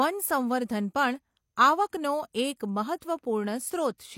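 At 3.00 s there's a pre-echo: the codec's block-wide quantisation noise leaks about 16 ms ahead of a sharp speech onset, so a short hiss smears the attack.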